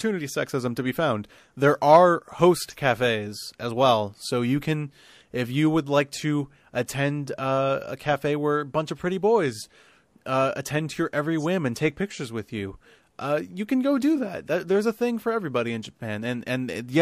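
At 6.86 s, after "you would like to" and before "uh a cafe where", there is pre-echo. A hiss about 12 dB up fills 18 ms before the attack. The codec's 36 ms block spread noise backwards, apparently without short blocks. The attack sounds smeared.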